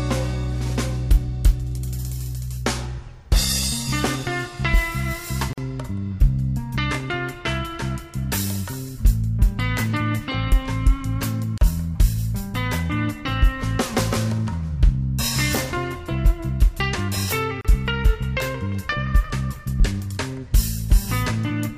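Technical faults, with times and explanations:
5.53–5.58 s, 11.58–11.61 s, 17.61–17.65 s: gap at a join of encoded pieces. Separately encoded pieces, roughly every 6 s, were joined with encoder start delay and final-frame padding left in, so the sound drops out for 46, 34 and 34 ms, then resumes where it stopped.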